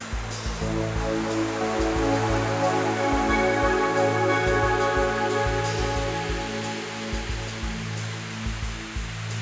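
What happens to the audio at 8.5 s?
At 8.5 s the music plays through intact, with no dropout, click or distortion, only the steady band-limiting of the call microphone processing.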